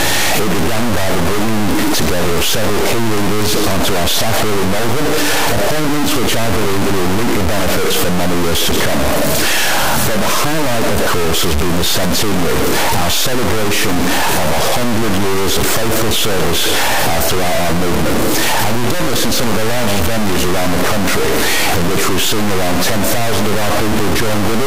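A stuck bit runs through the whole clip. The sound carries harsh, buzzy distortion, and quiet gaps fill with noise. The likely cause is one data bit held fixed, so about half the samples jump by roughly -10 dBFS.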